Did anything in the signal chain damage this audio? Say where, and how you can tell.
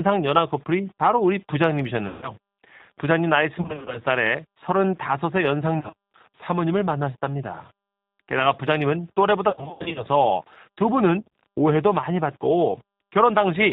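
Yes. At the codec stage, the whole clip has been through G.729 at 8 kbit/s, and it's plainly audible. Nothing comes through above 4 kHz, and the speech has that rough, slightly synthetic edge you get when it's rebuilt from a vocal tract filter, a pitch predictor and sparse pulses.

On the network side, there's VoIP packet loss concealed by the speech codec at 2.08–2.30, 3.61–4.01, 5.79–5.94, 9.50–10.07 and 11.20–11.28 s. The decoder stretches its last pitch and filter into a fading buzz, and the 9.5 s stretch is worst, with gaps up to 80 ms long.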